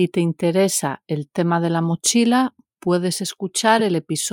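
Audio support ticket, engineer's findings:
Corrupt frame decoded at 3.78–3.81 s, right after "de la mochila puedes": short loud glitch, peaking near -10 dBFS, one frame long. Decoder played a bit-damaged frame, putting energy at wrong frequencies.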